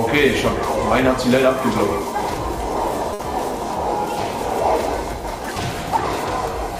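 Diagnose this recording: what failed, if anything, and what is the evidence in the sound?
The network stage failed with a burst of packet loss. At 3.13 to 3.22 s, the last sound is stretched and faded for about 60 ms as the receiver conceals the gap. The audio then resumes further on, with about 60 ms of sound missing.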